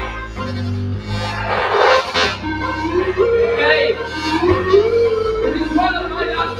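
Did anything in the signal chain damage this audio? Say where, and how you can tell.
Yes. The damage happens at the call-processing stage, where a noise suppressor applied to music or sounds was left running. Throughout the clip, sustained parts and decays pump and thin by around 5 dB, while attacks pass. The suppressor is mistaking steady tonal content for background noise.

At 0.16 to 0.43 s, the sound is cut by the noise suppressor, dipping by about 7 dB at its deepest for roughly 300 ms. The held portion sinks and its tail shortens because the suppressor classed that steady energy as noise and attenuated it.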